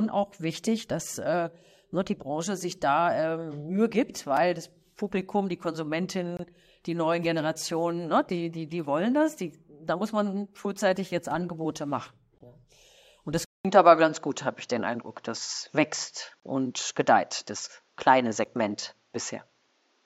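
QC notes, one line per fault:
4.37, 6.37–6.39, 12.38–12.41, 16.40–16.43, 18.45 s, gap between stream segments: Brief hard-edged dropouts cut into the speech, the longest (22–26 ms) at 6.37 s just before "die neuen", at 12.38 s and at 16.40 s, and two shorter ones of about 5 and 7 ms. They fall near 2-second boundaries, where consecutive stream segments don't quite meet in time and the player pads the hole with digital silence. Nothing is missing from the speech itself.
13.45 s to end, input switched to a poorer device: After a 200 ms silence the voice turns dull and boxy, with nothing above 7.6 kHz, a level shift of roughly 5 dB and a new noise floor about 45 dB under the speech. The sudden band-limiting, changed tone and different background at a single point most likely mean the recording input moved mid-clip to a narrower-band microphone or a headset's call profile.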